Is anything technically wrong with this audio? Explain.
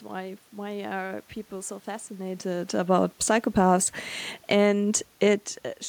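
Yes. Automatic gain rising, 4.59 to 5.05 s: the input fell about 13 dB, so gain climbed about 5 dB, swelling voice and room noise; the waveform envelope and spectrogram noise floor gradually thicken.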